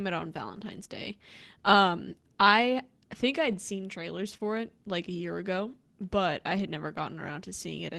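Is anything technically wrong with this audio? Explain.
Yes, there are short packet-loss faults in this speech, heard over an Opus call path whose sound is cut off above about 12 kHz, which fits a rate near 24 kbps.

Lost packet rebuilt from error correction, at 0.69–0.71 s, 3.47–3.53 s (after "I think", before "seen trailers"), 4.33–4.35 s and 6.57–6.59 s (after "year ago but I"). Each missing packet was replaced by a low-rate copy carried in the next one, so nothing drops out. Those 20 ms stretches, 40 ms at 3.5 s, sound briefly rougher and noisier.

Short concealed packet loss, at 4.37–4.41 s, just after "seen trailers" and before "it like a year". About 20 ms never arrived, and the decoder extended the preceding sound to fill it before blending back into the real signal. It comes through as a brief smear or wobble.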